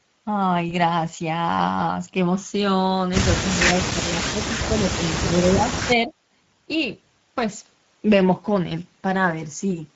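Speech runs through the Speex codec throughout, with plainly audible hoarse, noisy CELP texture and a thin noise-like top end, which fits a mid setting near 16.8 kbps. VoIP packet loss concealed by the speech codec appears at 0.69 to 0.75 s. A brief, fading extrapolation, consistent with one lost 20 ms frame, lingers weakly afterward instead of clicking or dropping to silence. From 5.56 to 6.13 s the voice dips by roughly 30 dB over about half a second, most likely speech suppressed in double talk. Unlike concealment, it is gating rather than synthetic buzz.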